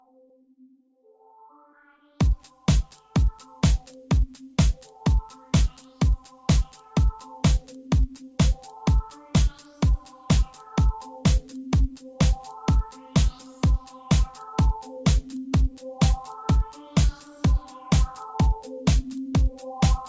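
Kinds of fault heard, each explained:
No faults can be heard.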